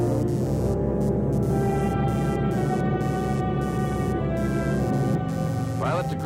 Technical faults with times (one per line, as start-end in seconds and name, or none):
0.00-6.26 computer activity noise